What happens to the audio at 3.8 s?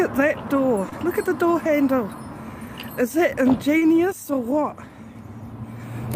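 A brief smear or wobble runs from 3.77 to 3.83 s, where the sound seems to stretch oddly before easing back. This is short concealed packet loss: about 40 ms of audio never reached the decoder in time, so the receiver extended the preceding sound to cover the gap, then blended back into the real signal.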